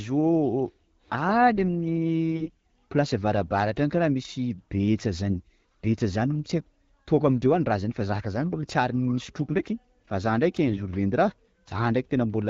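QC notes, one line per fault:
2.32–2.50 s, 5.28–5.35 s, 10.68–10.80 s: AMR bit errors. Flipped low-priority frame bits misplace excitation pulses and skew gain and spectrum, so speech turns hoarse and gargly, worst in the first burst.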